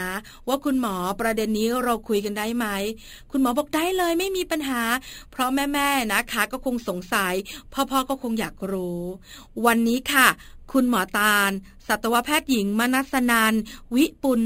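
Imaging from sample-and-hold upsampling affects this speech clip throughout. The audio was raised to 48 kHz by repeating samples without a smoothing filter, which fits a source rate near 11 kHz. Mirrored copies of the spectrum add a bright metallic fizz about 15 dB below the speech, tracking its level, with the lowest copy spanning roughly 5.5 to 11 kHz.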